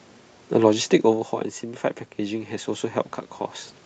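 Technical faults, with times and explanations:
1.09 s to 2.95 s, automatic gain rising: the speech and the room noise behind it swell together, slowly, over almost two seconds, so the background comes up along with the speech. The level at the microphone had dropped by about 9 dB, as happens when the talker moves back around 1 s, and the automatic gain control responded by raising its gain gradually, by about 3 dB, recovering only part of that loss.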